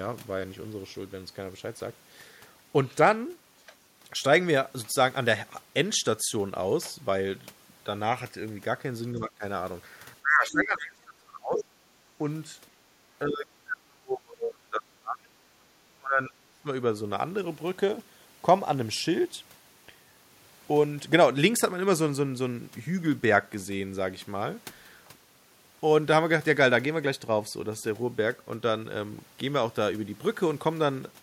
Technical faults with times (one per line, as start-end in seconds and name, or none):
9.15-9.43 speech suppressed in double talk
10.21-11.68 speech suppressed in double talk
10.58-10.62 other side's voice leaking through
11.56-11.64 other side's voice leaking through
13.28-15.38 speech suppressed in double talk
15.97-16.67 speech suppressed in double talk